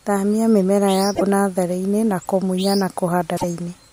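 Damaged data in a compressed stream appears twice in this speech, from 1.11 to 1.22 s and again from 3.33 to 3.44 s, each lasting about a tenth of a second. In both places the encoded bytes are corrupted, so the decoder misinterprets or discards those frames, loses its place in the bitstream and hunts for the next valid frame header. The result is a brief chirp, squawk, click or short hole cutting into the speech.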